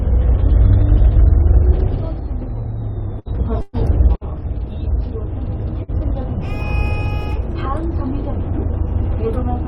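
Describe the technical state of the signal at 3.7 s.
At 3.7 s the signal sits inside a burst of packet loss running from 3.61 to 3.76 s. About 120 ms never arrived; the receiver stretched the last sound and faded it, a smeared, decaying buzz or hiss. On a spectrogram, frozen horizontal bands fade out before the audio jumps ahead.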